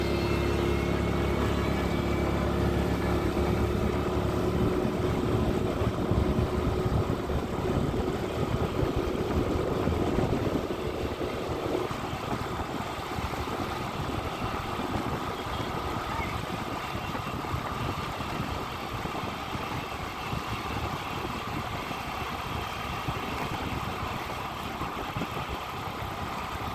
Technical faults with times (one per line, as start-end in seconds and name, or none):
none